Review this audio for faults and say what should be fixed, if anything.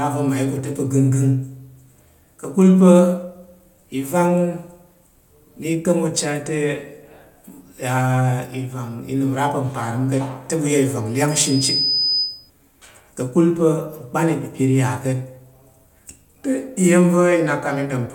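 Loudspeaker feedback squeal, 11.29–12.50 s: mic-to-speaker loop gain exceeds one at 5 kHz, so the tone swells over roughly half a second, unlike a steady whistle. Lowering monitor gain or moving the microphone away from the loudspeaker would prevent it.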